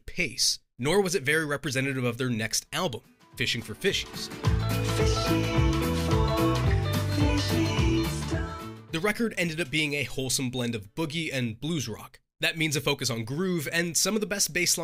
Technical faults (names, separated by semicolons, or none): none